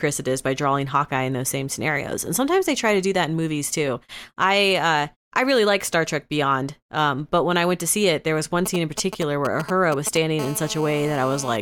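From 8.66 to 10.40 s, just after "it there was one", a nearby 2G phone's signalling transmissions are rectified by the audio circuit. These GSM signalling bursts come out as a galloping dit-dit-dit of short 217 Hz buzzes, roughly 10 dB below the speech. From 10.40 to 11.57 s, the phone transmits in bursts during a call, 217 times a second, and the rectified pulses produce a GSM phone buzz. It is a steady, hard, raspy 217 Hz buzz rich in harmonics, about 14 dB below the speech.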